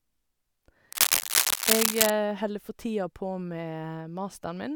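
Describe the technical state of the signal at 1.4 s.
Dense, uneven scratching and rustling sits over the speech at 1.4 s, a little louder than the speech itself. It is part of a burst of cable scratch noise running from about 0.92 s to 2.11 s, ending just before "holder for tida på". The likely cause is a worn cable, connector or control being moved, so its contact resistance jumps around rapidly and injects ragged noise into the signal for the length of the movement.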